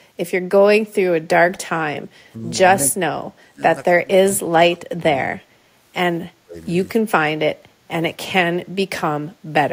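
At 1.53 to 1.58 s, a brief echo leak is heard: a faint copy of the speech returns about 243 ms late, roughly 35 dB below the direct sound. Its likely cause is a far-end echo canceller that did not fully remove what its microphone picked up from a loudspeaker, so a short scrap of residual echo was sent back.

Straight after, from 1.60 to 1.66 s, the first instance of speech suppressed in double talk appears. The speech level dips by around 15 dB for about 70 ms. The same ducking recurs at 1.95 to 2.13 s (around 10 dB), 2.81 to 3.62 s (around 25 dB), 3.97 to 5.13 s (around 25 dB, lasting about a second), 6.39 to 6.56 s (around 20 dB), 6.97 to 7.04 s (around 10 dB) and 7.56 to 7.88 s (a mild dip of around 5 dB). The speech sinks, thins or briefly drops out in pieces. This is likely an echo canceller that, with both ends active at once, could not separate the local speech from loudspeaker echo and attenuated both.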